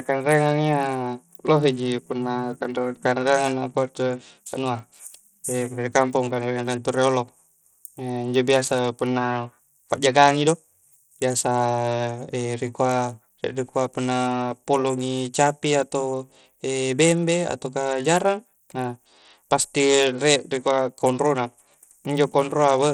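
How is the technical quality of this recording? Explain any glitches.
The recording has one fault that runs through the whole of the speech: Bluetooth SBC compression. The audio was likely passed over a Bluetooth link using the SBC codec at a very low bit budget, which fits a rate of around 80 kbps. With so few bits to share, the upper sub-bands are starved and the lower ones are quantised coarsely, so the treble thins and flickers while a gritty, plainly audible grain and aliasing sit on top of the speech from start to finish.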